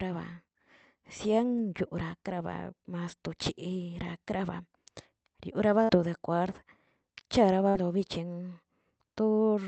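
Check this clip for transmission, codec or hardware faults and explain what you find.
Two short dropouts stand out, both bursts of packet loss, heard against the call-path sound, whose top end stops at about 8 kHz, which fits Opus at around 32 kbps.

At 5.83 to 5.92 s and again at 7.69 to 7.78 s, the sound briefly smears into a held, fading continuation of itself, then picks up slightly further along. Each time roughly 60 ms of audio never arrived; the receiver stretched and faded the last sound for about 55 to 60 ms to cover the hole before resuming.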